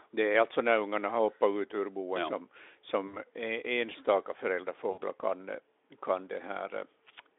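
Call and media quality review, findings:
VoIP packet loss concealed by the speech codec, 3.08–3.18 s and 4.91–5.02 s. About 60 ms each, consistent with three consecutive 20 ms frames lost. Decoder repeats last pitch and filter, gain decaying, giving a buzzy or noisy smeared tail, then weak, rough recovery. Differs from a hard dropout: no clean silence or click, and damage outlasts the gap. Speex on a 300–3600 Hz line band shows at most faint codec damage around both events.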